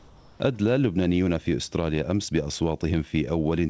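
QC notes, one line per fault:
0.0–0.4 s: comfort noise in place of the background. Steady, featureless hiss about 6 dB quieter replaces the real background. Likely discontinuous transmission filling the pause.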